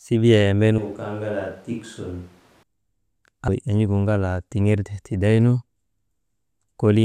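A switch to a distant microphone runs from 0.78 to 2.63 s. The speech turns roomy and hollow with thinner bass, dropping about 10 dB, and room noise rises to roughly 25 dB below the speech. The likely cause is that the close microphone's signal was lost. Both changeovers are abrupt.

Compressed frames skipped at 3.48 s make the speech jump ahead by about 0.7 s, which fits around twenty missing or rejected frames of 26.1 ms each. Because adjacent frames overlap, the join is heard as a short smeared blip rather than a sharp click.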